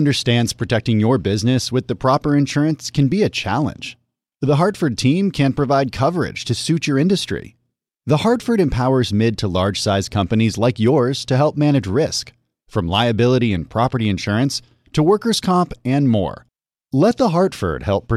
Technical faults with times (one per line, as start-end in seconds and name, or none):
15.95 dropped samples